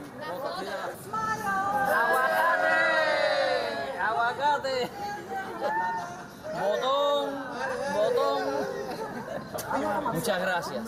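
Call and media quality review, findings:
Gain pumping throughout. Gain swing around 5 dB. Likely cause: input gain far too high, fast limiter/compressor clamping peaks. Waveform: flattened, even envelope.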